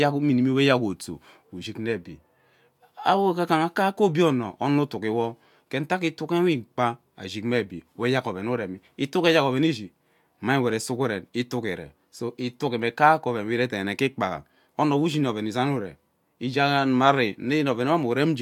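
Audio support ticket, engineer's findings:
Nothing stood out on listening to this speech recording.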